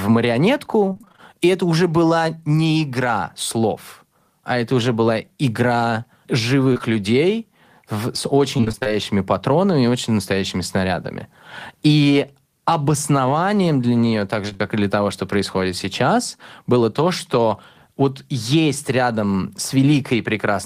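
Packets in this speech recording repeatedly failed to reach the decoder in time, twice in bursts of repeated packet loss: from 0.89 to 1.20 s, and from 8.57 to 8.94 s between "людей в с" and "патронами и очень настоящими". In each burst there are eight gaps, none longer than about 23 ms, and the receiver papered over each one by extending the preceding sound. Almost half of each stretch is synthetic fill, so the voice turns choppy and robotic, with fragments of sound missing. Shorter runs of short concealed packet loss occur at 6.73 to 6.81 s, just before "людей в с", and at 14.49 to 14.61 s, right after "обоснованием для нее так". Back-to-back holes of about 20 ms each, which fits 20 ms packets, were filled by continuing the previous sound and then blended back into the real signal. The result is a brief smear or wobble at each point, in which a short consonant can disappear.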